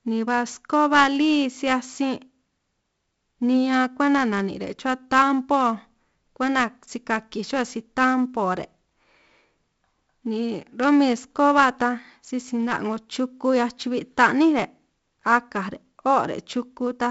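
From start to finish the speech carries 4-bit ADPCM compression, heavily applied. Each sample is coded as a coarse step from a prediction, so a gritty hiss rises and falls with the speech level and roughens sharp onsets. Nothing reaches above 7.7 kHz, which fits a 64 kbps stream at a low sample rate and dulls the top end. Unlike an MP3's swirling, watery smearing, this grain is steady and tied directly to loudness.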